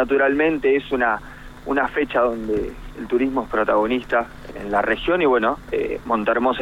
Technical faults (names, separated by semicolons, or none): none